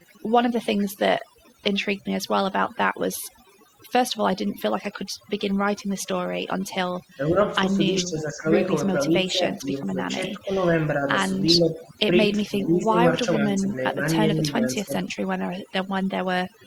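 Throughout, the voice sits over a near-silent, twinkling background, the mark of overdone noise removal stripping quiet voice detail along with the noise. At 0.07–0.14 s, 0.79–0.86 s and 5.77–5.91 s, faint scraps of the voice return 441 ms late, at about -35, -25 and -30 dB. This is likely an echo leak from a loudspeaker side whose canceller let the echo through. From 7.16–8.6 s, 9.08–11.18 s, 11.56–11.94 s, 12.48–14.02 s and 14.34–15.05 s, the voice dips by roughly 10 to 15 dB in patches. This is likely speech suppressed in double talk, where the canceller mistook overlapping talk for echo.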